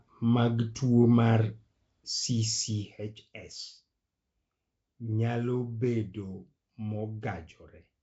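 From start to finish the speech carries a rough, hissy halo and a smeared, underwater quality, with plainly audible coding damage and nothing above about 7.7 kHz. This points to Nellymoser compression, likely from Flash's Nellymoser Asao microphone codec, and fits a bitrate near 32 kbps. That codec spends a fixed two bits per sample on each 256-sample block, so weaker bands receive no bits and are refilled with noise, producing the hiss and smearing heard here.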